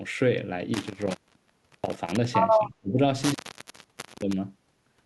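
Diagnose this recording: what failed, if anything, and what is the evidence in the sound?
A loose connection in the analogue wiring opened twice, from 0.74 to 2.25 s and from 3.23 to 4.33 s. The speech drops out for about 0.69 s and 0.88 s, with crackle at the edges: intermittent contact.

Between 2.59 and 2.97 s the speech dips by roughly 25 dB, likely speech suppressed in double talk, where the echo canceller turned down the talker along with the echo.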